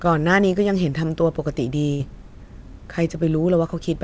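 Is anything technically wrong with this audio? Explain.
Yes. There is a burst of packet loss from 1.94 to 2.02 s. A run of packets arrived too late or not at all, and the receiver filled about 59 ms by extending the last sound and lowering its level. The result is a brief held buzz or fading hiss in the speech. Playback then resumes with about 60 ms of speech skipped. The G.722 call path carries no content above 8 kHz.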